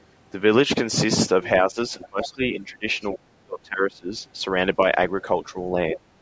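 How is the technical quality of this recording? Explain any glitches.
The recording has two linked glitches from a speakerphone-style call. The call's microphone processing limits the sound to nothing above 8 kHz.

Other side's voice leaking through appears at 1.44 to 1.49 s, 1.99 to 2.28 s, 3.01 to 3.19 s and 5.95 to 6.0 s. A faint second voice sits under the speech. It is about 20 dB down, about 15 dB in the longest scrap. The likely cause is an echo canceller leaving loudspeaker sound in the microphone.

Speech suppressed in double talk runs from 1.7 to 4.16 s, then again from 5.53 to 6.0 s. The main voice dips and thins in patches. In the first stretch it drops by roughly 25 dB, for about one and a half seconds in total. The later dip is shallow, around 5 dB. The likely cause is the canceller ducking everything while both sides talked at once.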